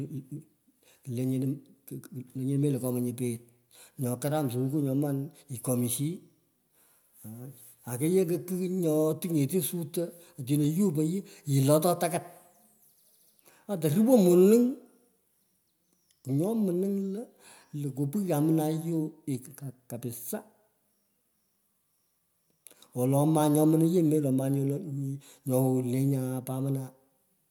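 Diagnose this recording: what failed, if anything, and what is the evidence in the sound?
The buffer stage between two independently clocked devices likely drifted apart, producing clock drift buffer slips. From 1.21 s to 27.13 s a small click recurs every 2.36 s through the speech, about ten in all, each fitting a few samples dropped or repeated.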